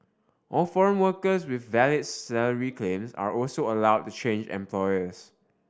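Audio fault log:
No audible faults detected.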